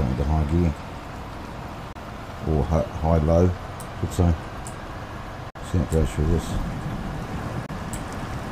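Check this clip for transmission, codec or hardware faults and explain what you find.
Three short dropouts interrupt the sound, at 1.92 to 1.97 s, 5.50 to 5.57 s and 7.66 to 7.70 s, lasting roughly 40, 65 and 45 ms. Each is a brief hole of silence, consistent with a Bluetooth dropout. Packets likely missed their delivery window to the headphones and were discarded. The gap lengths fit one, two and one lost frames of about 23 ms each. Unlike a buffer underrun, where playback stalls and then continues from where it stopped, the sound here picks up further along, as though it had kept playing through the gap.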